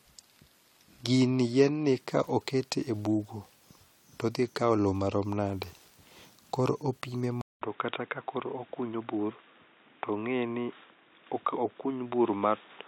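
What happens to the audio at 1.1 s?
At 1.1 s the speech is inside an adaptive stream starting at a low bitrate, running from 0.0 to 2.0 s. The player begins on a lean encode, which fits HE-AAC at about 24 kbit/s, so the treble sounds synthetic and artefacts are heavier. Unlike a rebuffer, quality then jumps with no gap, just before "ka oket e bugo".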